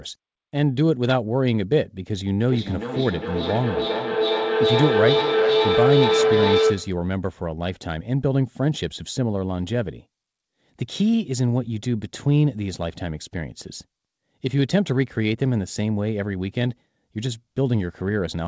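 From 2.48 s to 7.09 s, a feedback howl builds as the sound loops from loudspeaker to microphone, gaining level each trip. It narrows to a tone around 400 Hz, with repeats roughly every 400 ms, and peaks about 2 dB above the speech. A spectrogram shows a bright horizontal band, and the waveform shows a swelling envelope.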